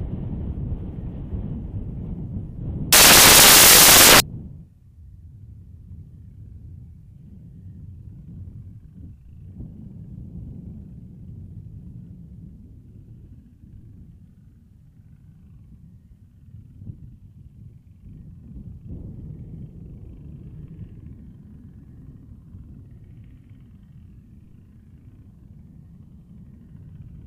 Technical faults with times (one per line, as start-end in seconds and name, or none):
2.93-4.20 samples built from the wrong bytes